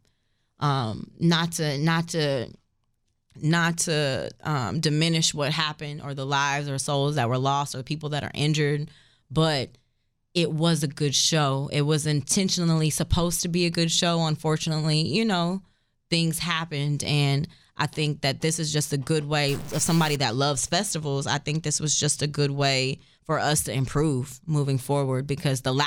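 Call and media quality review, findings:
Stuck bit, 19.49–20.16 s, after "is just a good", before "that loves festivals I". Harsh buzzy distortion riding the speech, with quiet gaps filled by a steady fizz. Likely a failing converter or data line holding one bit fixed, shifting about half the samples by roughly -35 dBFS.

The distortion follows the waveform's own sample values, which sets it apart from clipping (peaks only) and from added hum or hiss (independent of the signal).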